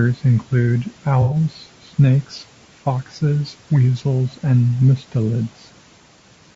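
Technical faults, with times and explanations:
Throughout, low-delay AAC compression: rough, grainy sound, likely from a low-delay AAC encode fitting about 32 kbps. The spectrogram shows noise filling gaps between harmonics and a thin, synthetic top band.
1.22 to 1.36 s, AAC frame loss with concealment: a smeared, noisy patch where missing audio, fitting about three lost frames, was rebuilt from earlier spectrum. It appears as a blurred, flattened block on the spectrogram.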